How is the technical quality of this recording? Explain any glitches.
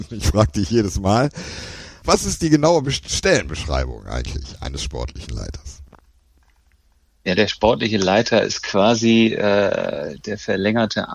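No glitches or faults can be heard anywhere.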